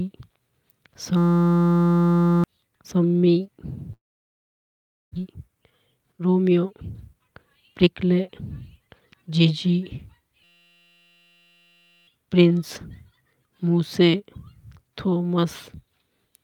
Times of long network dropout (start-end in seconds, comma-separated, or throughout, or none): 3.93-5.18